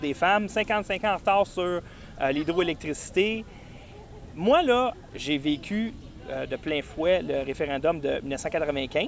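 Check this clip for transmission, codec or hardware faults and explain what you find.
Nothing detected here points to a transmission, codec or hardware problem.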